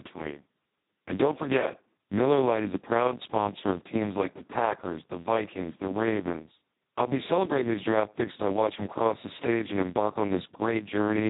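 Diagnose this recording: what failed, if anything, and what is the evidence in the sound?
The failure is at the codec stage: the whole recording carries heavy Speex codec damage. The speech is hoarse and buzzy, close to robotic, because the CELP excitation is starved of bits. This fits a setting near 2 kbps. Nothing is present above 3.8 kHz. A simple low-pass filter would cut the top but leave the voice clean, and the grainy, vocoder-like texture here is what sets this apart as codec coding damage.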